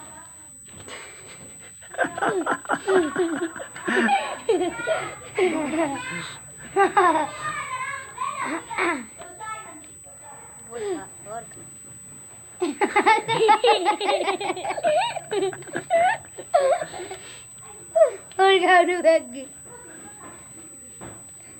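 USB whine runs through the whole clip, a steady, fixed-pitch tone at 8 kHz sitting roughly 20 dB below the sound. It comes from the USB bus drawing current in 125-microsecond microframes, which leaks into the audio through the power or ground path.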